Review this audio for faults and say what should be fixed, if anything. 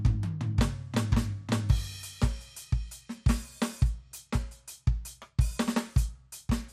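MP2 compression damage runs through the whole music clip, and it is plainly audible. Nothing is heard above 15.7 kHz. The top end sounds dull, with a gurgling, granular texture underneath. The likely cause is MPEG Layer II coding at too low a rate, which fits roughly 80 kbps. Short of bits, the encoder shuts off upper sub-bands and coarsely quantises the rest, so detail flickers in and out. To prevent it, encode at a higher bitrate or use a more efficient codec.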